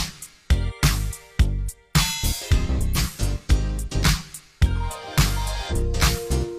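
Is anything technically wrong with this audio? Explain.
Yes. There is damaged data in a compressed stream at 0.65–0.72 s, 2.93–2.98 s and 5.67–5.73 s. At each point some of the encoded bytes were corrupted. The decoder misreads or rejects the affected frames, loses its place and hunts for the next valid frame header before playback recovers. Each event is heard as a brief chirp, squawk, click or short hole lasting roughly 50 to 70 ms.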